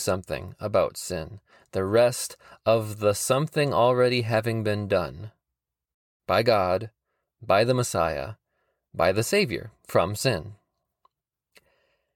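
A rebuffering stall at 5.95 s: the player exhausted its downloaded audio and halted, so the speech drops to silence for about 0.25 s, then resumes exactly where it stopped.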